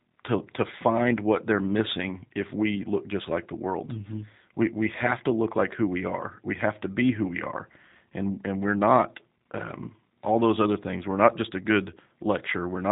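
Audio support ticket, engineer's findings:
G.729 codec damage across the whole speech clip, 0 to end. Band ceiling at 4 kHz; the spectrogram shows an empty band above that line throughout. Voice rough and faintly synthetic, consistent with a G.729A-family encoder, which fits an 8 kbit/s VoIP leg. The mechanism is that speech is rebuilt from a vocal tract filter, pitch predictor and sparse pulses per 10 ms frame.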